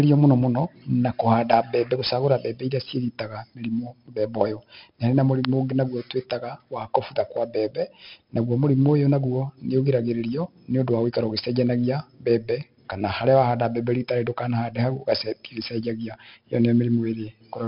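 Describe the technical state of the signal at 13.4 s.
At 13.4 s the speech carries a gritty hiss that rises and falls with its loudness, roughness on sharp onsets, and a dull top with nothing above 5.3 kHz. This is 4-bit ADPCM compression, present throughout. Coding each sample as a coarse step from a prediction leaves heavy, level-following noise, consistent with a rate near 44 kbps.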